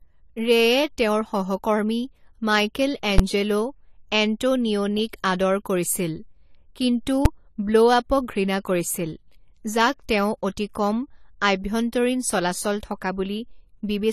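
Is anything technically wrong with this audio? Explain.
Yes. Two faults can be heard in this speech clip.

Throughout, the audio sounds like low-bitrate audio saved at a high bitrate. It is now MP3, likely transcoded from a low-bitrate earlier encoding. The re-encode cannot restore lost detail. The old artefacts remain, and nothing sounds above 19.9 kHz.

At 3.18 s and 7.25 s there are invalid numbers at full scale. A calculation produced invalid values that were pinned to maximum level. Each block is very short, about 11 ms and 5 ms, consistent with 512- and 256-sample blocks. Each is heard as a single loud bang.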